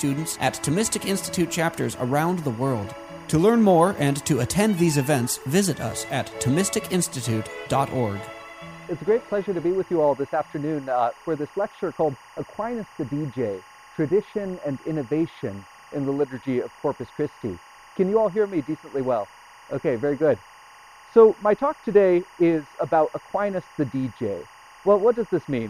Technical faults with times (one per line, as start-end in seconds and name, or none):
0.00-25.70 timecode bleed